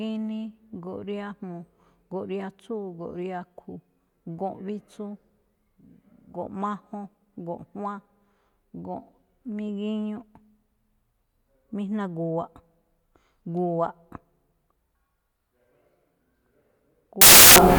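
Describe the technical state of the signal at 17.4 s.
Samples built from the wrong bytes run from 17.21 s to 17.78 s, the end of the clip. Each sample's bytes are misassembled, so the rapidly changing low bits dominate its value, and the speech gives way to loud, harsh broadband noise, close to white on loud sounds.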